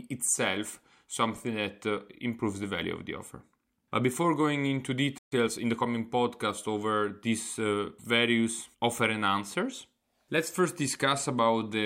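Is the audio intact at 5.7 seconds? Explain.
No. After a stall, the player is working off its backlog with a time-compressed catch-up from 5.32 to 5.86 s, removing small slices of audio and cross-fading the joins to run at 1.25 times normal speed. The speech sounds hurried but keeps its pitch.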